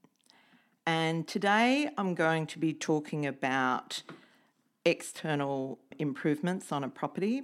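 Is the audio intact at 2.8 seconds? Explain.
Yes, at 2.8 seconds the speech is intact, with no dropout, glitch, distortion or other fault to be heard at that moment.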